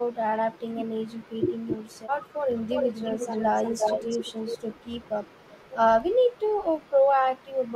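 Between 1.34 and 1.45 s, an echo canceller likely heard both sides talking at once and turned everything down, its own talker included. This is speech suppressed in double talk. The speech drops by roughly 20 dB for about a tenth of a second, a brief hole in the sound.

From 2.53 to 4.59 s, the loudspeaker end's canceller likely failed to remove what its microphone picked up and sent it back. This echo leak is a copy of the speech delayed by 353 ms and only about 5 dB quieter. Fainter scraps return at 4.81–5.10 s, about 35 dB down, and at 5.29–5.73 s, about 30 dB down.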